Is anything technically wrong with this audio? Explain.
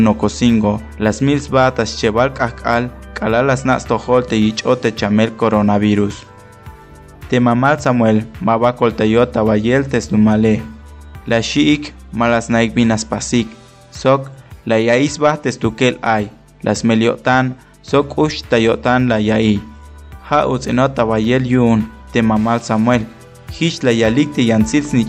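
No, nothing here sounds technically wrong, and the audio comes across just as it should all the way through.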